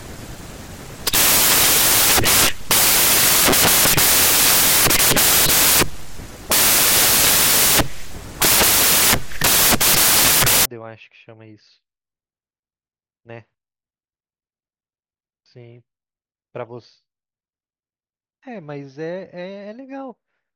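From the start to 10.65 s the speech is buried under loud, harsh broadband noise. These are samples built from the wrong bytes: each sample was assembled misaligned or byte-swapped, so its rapidly changing low bits became the dominant part.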